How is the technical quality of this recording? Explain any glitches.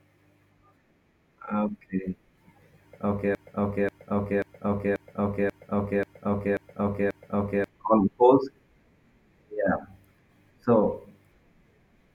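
The recording has one serious glitch. From 3.35 to 7.68 s there is a broken-record loop: a 0.54 s fragment of speech repeats eight times back to back. The likely cause is a stalled player or stream resending its last buffer, so the speech due in that span is lost. On a waveform and spectrogram, identical blocks tile at exact 0.54 s intervals.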